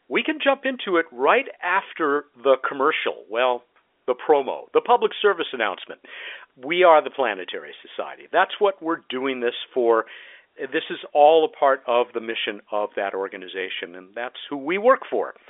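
No technical faults can be heard anywhere here.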